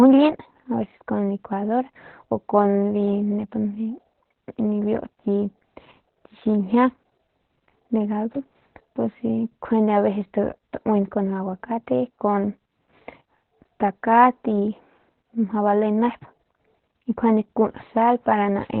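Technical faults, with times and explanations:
Throughout: Opus voice compression. The speech sounds muffled, hoarse and slightly robotic, with nothing above 4.3 kHz. Narrowband SILK coding at 8 kbps leaves the excitation coarse.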